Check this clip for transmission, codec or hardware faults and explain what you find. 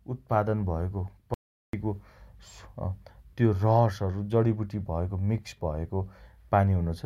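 One fault is present. Audio dropout to silence, 1.34 s to 1.73 s: the input signal was likely lost for about 390 ms while recording carried on writing zeros. The speech cuts off abruptly into total silence with no room tone, then resumes mid-flow, and that stretch is gone.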